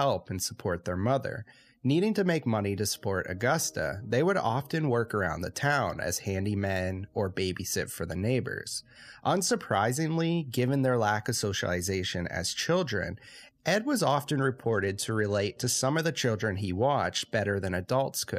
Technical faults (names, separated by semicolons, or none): Bluetooth SBC bit pool drop